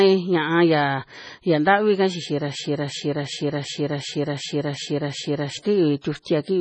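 From start to finish the speech carries MP3 compression damage, heavy and most likely caused by MP3 coding at a low bitrate, which fits roughly 24 kbps. Nothing is left above 9.8 kHz, so the top is dull. Unlike a plain low-pass filter, weak frequency components flicker on and off from frame to frame, giving a watery, swirly texture and metallic chirps on sibilants, with consonant attacks smeared.

From 2.60 s to 5.57 s a system hang loop takes over. The machine stalled while the audio hardware kept replaying the same ring buffer, so one 371.52 ms piece repeats exactly, 8 times, at 2.69 Hz, which fits a 16384-sample buffer. Roughly three seconds of real audio are lost. What separates this from a stutter or dropout is that every repeat is identical and perfectly regular, heard as a mechanical stuck-loop rhythm rather than silence or random glitches.

Between 6.22 s and 6.26 s there is pre-echo: a short hiss lasting 40 ms just before a sharp onset. 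The codec spread its quantisation noise across the whole transform block, so noise meant for the loud attack also filled the quiet moment ahead of it, and the attack sounds soft. Unlike reverberation or an echo, the smear comes before the sound rather than after it.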